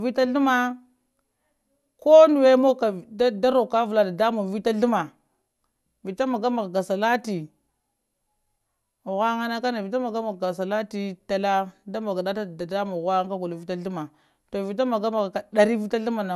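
A speech recording with no technical faults to report in its signal.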